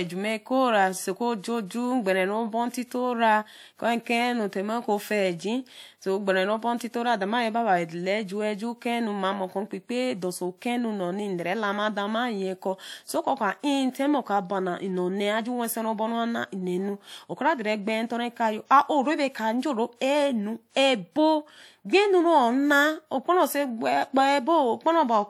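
Speech, with one transform-codec fault: pre-echo from 20.72 to 20.76 s. A 49 ms hiss arrives just before a sharp attack, because quantisation noise spread across the coding block fills the quiet moment ahead of it. Unlike reverb or an echo, the smear comes before the onset instead of trailing after it.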